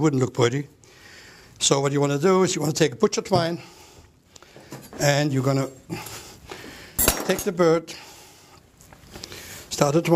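No technical faults can be heard anywhere in the clip.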